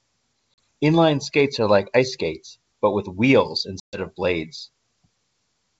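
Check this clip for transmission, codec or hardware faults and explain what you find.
Two dropouts from packet loss on an ADPCM call are audible, one at 0.54 to 0.58 s (40 ms) and a longer one at 3.80 to 3.99 s (about 130 ms lost). The wideband G.722 coding itself shows at most faint hiss above 4 kHz, which fits the full 64 kbit/s mode.

At each point the speech cuts to hard-edged silence. The receiver's adaptive predictor and step size then no longer match the sender's, so the speech comes back briefly with some distortion before it settles.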